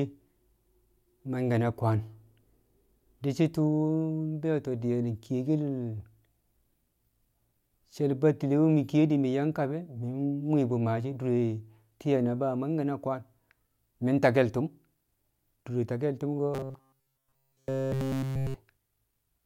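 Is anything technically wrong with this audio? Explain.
Yes. From 16.54 to 18.56 s there is robotic sound from repeated short buffers. The likely cause is audio arriving too slowly for playback, so the software loops its last short chunk instead of the missing material, and across essentially this whole stretch the real signal is replaced. That loop imposes a fixed buzz at 133 Hz, which fits a buffer of about 7.5 ms, so the speech becomes a rigid, metallic drone that only loosely follows its original shape.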